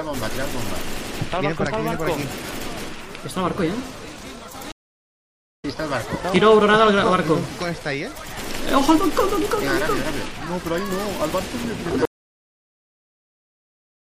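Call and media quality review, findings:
MP3 compression, throughout. Watery, swirly texture with dulled treble, plainly audible. Likely cause: a lossy MP3 encode at a low bitrate, which fits around 64 kbps. The encoder starves weak frequency lines, so they flicker between frames, and it cuts the top end.

Stream reconnect, 4.72 to 5.65 s. About 0.92 s of silence, then the audio resumes roughly half a second further on in the material. The connection dropped and the player reconnected, starting a fresh decoder mid-stream. The content during the gap and the skipped section is lost.

Audio dropout to silence, 12.05 s to end. Sound cuts out mid-flow and the rest is dead silence with no room tone. Likely cause: input lost, through a disconnect, a failed link or a mute, while the recorder kept writing silence.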